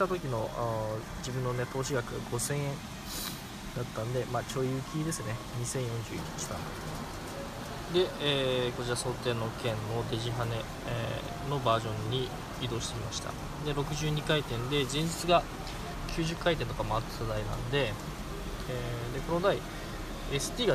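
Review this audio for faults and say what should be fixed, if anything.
A single loud pop sits at 16.37 to 16.39 s, a sharp click peaking a few decibels above the surrounding sound, which carries on underneath it. The likely cause is a sudden voltage step or pulse, perhaps from a switch, plug or static discharge, entering the signal chain. On a waveform it shows as a narrow spike standing above the envelope; on a spectrogram, as a thin vertical line spanning the full frequency range. To prevent it, keep connectors secure, avoid switching equipment while recording, and ground the setup properly.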